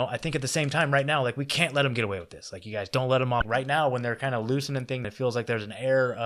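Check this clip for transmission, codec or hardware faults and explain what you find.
Two faults are present, both damaged data in a compressed stream, at 3.39–3.43 s and 5.04–5.07 s. Corrupted bytes made the decoder misread frames and resynchronise, producing brief blips in the speech.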